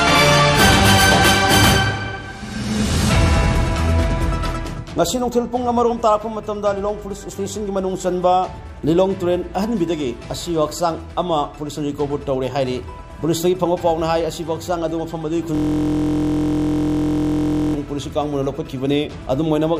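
A system hang loop runs from 15.55 s to 17.74 s. The playback system stalled while the audio hardware kept replaying the same ring buffer, so a single 23.22 ms slice of sound repeats exactly, over ninety times in a row. That loop length fits a 1024-sample buffer. Because the repeated piece is so short, the result is a steady, mechanical buzz pitched at the loop rate of 43.1 Hz rather than a stutter, ending at 17.74 s.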